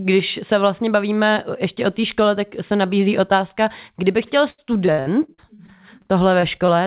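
From 4.5 to 6.7 s, right after "nabízí otázka kdyby chtěl", repeated packet loss produces robotic, choppy speech: about a dozen short holes, the longest 79 ms, are patched by extending the preceding sound, and roughly a fifth of that stretch is concealed audio. The band stays capped at 4 kHz, consistent with G.711 on the call path.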